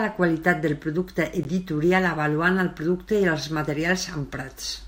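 At 1.43 s the speech drops out to silence for a brief 16 ms and then resumes, a tiny hole in the audio rather than a click or a smear. This is a Bluetooth stall, and the likely cause is radio interference delaying packets on the way to the headphones, so their small playback buffer emptied before fresh audio arrived and output simply paused until the delayed data came through.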